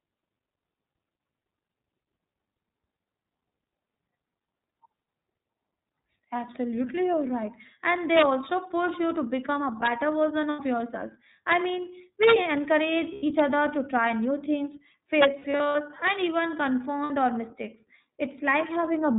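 Speech squeezed through the iLBC codec, and it's plainly audible: roughly 13 kbps with 30 ms frames, so nothing above 4 kHz gets through and the voice sounds a bit rough and synthetic. On top of that, integer overflow throws in violent cracks at 8.17–8.22 s, 9.86 s (just after "you to become a"), 12.23–12.33 s, 13.40 s (just before "other to try new"), 15.22–15.25 s and 16.07–16.10 s. Loud peaks went only slightly past the limit and wrapped to the opposite sign instead of being clamped. Lost iLBC frames cause brief buzzy, held-vowel patches where the decoder repeats the last pitch cycle. These come at 10.5–10.6 s and 13.14–13.24 s (just before "other to try new"), each about 90 ms, then in scattered bits totalling about 210 ms across 15.39–15.75 s with no run much longer than 70 ms, and about 60 ms at 17.03–17.11 s. The voice comes back cleanly almost at once each time.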